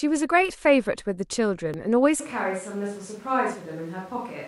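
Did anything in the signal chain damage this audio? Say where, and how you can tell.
Yes. At 0.50 s and 1.74 s the speech jumps slightly forward with no gap of silence. This points to a dropped buffer (overrun) at the driver or buffer stage as the likely cause. The capture side did not read a block before the hardware overwrote it, so roughly 10 ms of audio was lost each time and the surrounding sections were butted together, producing the discontinuity.

From 2.20 s to the end the speech becomes roomy and hollow at once, with thinner low end, a level drop of about 5 dB, and room noise rising to roughly 25 dB below the speech. The change is abrupt and never reverses. This matches a switch to a distant microphone at the analogue or input-selection stage as the likely cause: the close mic's feed failed or was dropped, and a farther pickup took over.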